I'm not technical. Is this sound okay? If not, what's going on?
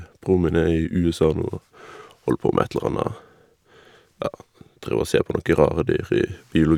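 Yes, nothing in this speech recording points to a technical problem with how the sound was captured or passed along.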